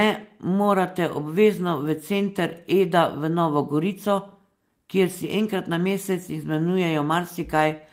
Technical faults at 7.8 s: none

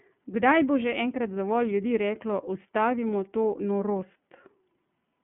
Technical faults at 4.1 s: iLBC codec

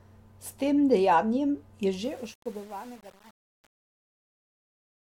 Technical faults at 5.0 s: truncation distortion on a fade

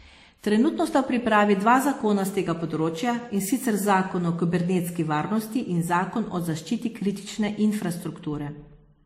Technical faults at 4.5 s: transcoding between lossy codecs

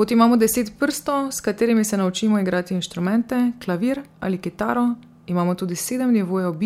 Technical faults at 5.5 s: none

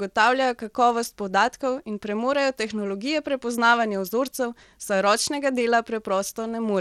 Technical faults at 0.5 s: Bluetooth SBC compression

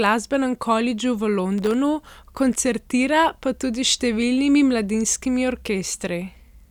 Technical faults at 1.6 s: processor overload crackle

